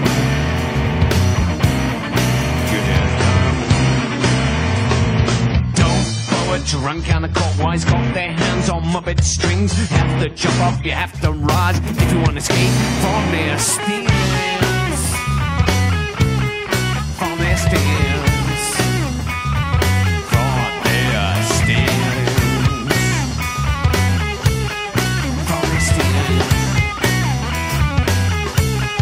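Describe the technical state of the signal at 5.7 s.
At 5.7 s the audio sits inside an adaptive stream at a lower bitrate, 2.98 to 10.98 s, where the treble sounds dull, consistent with a low-bitrate AAC version. A spectrogram shows everything above 10 kHz abruptly cut, with no gap in the waveform.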